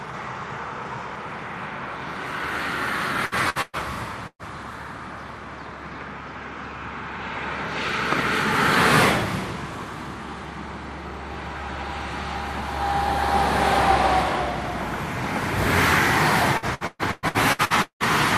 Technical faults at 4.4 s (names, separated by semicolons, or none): burst of packet loss